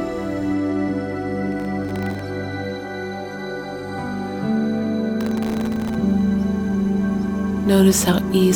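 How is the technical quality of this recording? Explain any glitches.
The recording has two bursts of processor overload crackle, from 1.52 to 2.19 s and from 5.21 to 5.95 s. In both, the processor fell behind and repeatedly missed its deadlines for very short audio buffers, each under a millisecond. Every miss dropped in a tiny hard-edged gap of silence, and these gaps add up to a gritty tearing crackle over the sound. The second burst is denser, with missed buffers numbering several dozen instead of a couple of dozen. A waveform shows the signal chopped by many thin dropouts to near silence, and a spectrogram shows scattered vertical broadband streaks across both spans.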